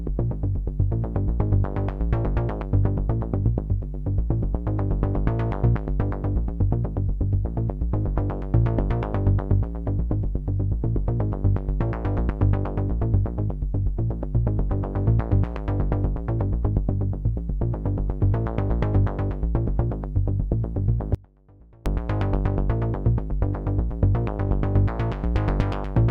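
At 21.15 s the signal path likely lost its feed for 0.71 s while staying live, an audio dropout to a faint residue. The sound cuts out abruptly, leaving only a faint leak roughly 25 dB down, then snaps back at 21.86 s.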